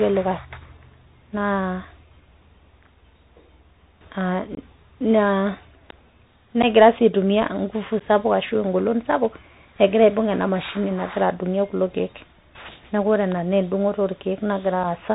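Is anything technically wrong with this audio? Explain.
Yes. The speech carries a Bluetooth CVSD headset codec throughout, with plainly audible damage. The 64 kbps stream sends one up-or-down bit per sample, and the step size adapts. Nothing above 4 kHz survives. Fast, loud high content outruns the step, so s sounds turn scratchy over a granular hiss.

There is also unconcealed Bluetooth headset packet loss. From 4.55 to 4.59 s, about 26 ms drops out across a 30 ms stretch, with the longest hole about 22 ms. That points to several lost packets. Shorter 11 ms holes come at 6.62 s, just before "sii aitumiya", and at 7.99 s, just before "sapuk ashu engolon sapuk". A 4 ms gap falls at 14.84 s. Missing packets become short holes with abrupt edges.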